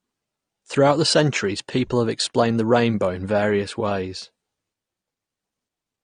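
From start to end, the speech sounds dull and smeared, with a warbling, fizzy edge on sibilants, which is likely AAC compression at a low bitrate, fitting roughly 32 kbps AAC-LC. On a spectrogram, expect a lowered upper cut-off and patchy gaps in the bands.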